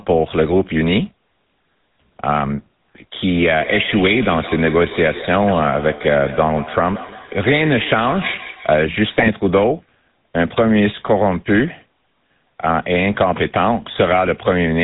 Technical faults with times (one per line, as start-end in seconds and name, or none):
0.00-14.83 GSM full-rate codec
3.60-8.87 feedback echo between two devices
9.18-9.29 GSM bit errors